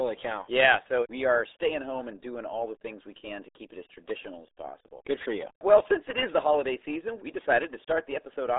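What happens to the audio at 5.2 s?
At 5.2 s the RealAudio 14.4 codec damage persists from start to finish. Nothing passes above 3.8 kHz, consistent with an 8 kbit/s dial-up coder, so speech sounds muffled and gargly.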